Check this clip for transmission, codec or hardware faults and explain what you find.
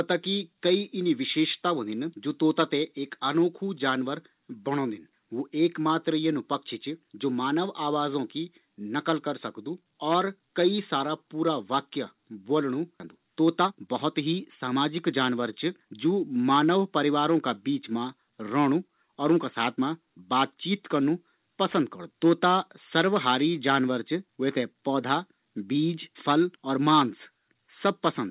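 Two transmission faults stand out in the speech, both around 13 seconds, heard over the narrowband telephone-style sound of the call path, which has nothing above 4 kHz, consistent with a G.711 A-law codec.

At 13.0 s the speech jumps forward abruptly with no gap and no fill, as though a piece had been snipped out and the two ends butted together. This is a skip ahead: roughly 0.7 s of audio was discarded, in transit or by an overflowing jitter buffer, while later audio was already queued.

From 13.16 s to 16.12 s the talking sounds rushed but keeps its normal pitch, running at about 110% speed. This is jitter buffer speed-up: with too much audio held, the receiver repeatedly cut out short pitch-period slices, around 0.3 s in total, to shrink the delay.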